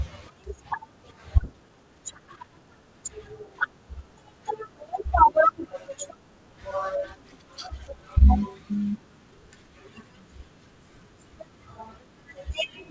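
At 1.44 to 1.46 s a skip ahead occurs. Roughly 0.7 s of speech is simply absent, and playback jumps forward with no gap. The receiver discarded a stretch of audio while later audio was already queued, cutting the delay by about the same amount. It sounds like an abrupt splice. On the waveform the two sides butt together with no silence, and on the spectrogram the harmonic pattern shifts discontinuously at that instant.

From 1.53 to 2.44 s a jitter buffer speed-up follows. The buffer was still holding more audio than its target, so the receiver repeatedly removed short pitch-period-sized slices, about a tenth of a second in total. That makes the passage run at roughly 111 % speed with unchanged pitch, so the speech sounds hurried. A spectrogram shows the harmonics at their normal spacing but syllables compressed in time. On the waveform, pitch cycles are subtly missing at the joins. Throughout, the G.722 call path at 64 kbps leaves nothing above 8 kHz.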